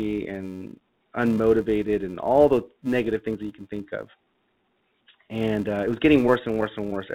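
From the first moment, the speech carries a filter restarted on every block. Each block opens with a tiny transient, producing a buzz at 375 Hz whose loudness tracks the speech level. This fits a 128-sample block. A spectrogram shows a steady line at 375 Hz and its harmonics, and the waveform shows regularly spaced ticks.

Clock drift between sender and receiver also runs through the whole clip. The sender's clock is roughly 3% slow, so the jitter buffer keeps draining. The receiver has to stretch the audio, and small timing hiccups recur at uneven spacing rather than at a regular rate.

Those stretches appear as repeated timing corrections from 0.17 s to 6.81 s, playing at 97% speed and adding about 200 ms in total. Each one repeats a short piece of audio, heard as a slight stutter or a wavering tempo. The waveform shows brief duplicated segments, and the spectrogram shows short patterns appearing twice where a piece was repeated. 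All of this sits within the call codec's band, which has nothing above 4 kHz.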